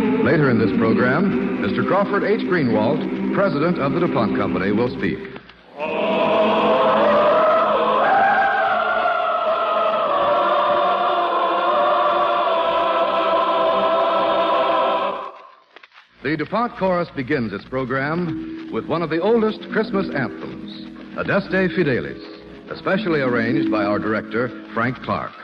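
No technical faults can be heard in this audio. Nothing in the sound points to a problem with how it was captured or passed along.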